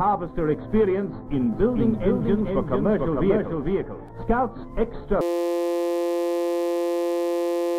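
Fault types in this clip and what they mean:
doubled audio track: From 1.52 to 4.09 s a full-band copy of the sound trails about half a second behind, roughly 5 dB quieter. It is dry and starts and stops abruptly. The likely cause is a slower second capture path or an out-of-step edit.
system hang loop: From 5.21 s to the end at 7.79 s the sound collapses into a steady 172 Hz buzz, one 5.8 ms scrap repeated hundreds of times, which fits a 256-sample buffer. The system froze while the hardware kept cycling its ring buffer.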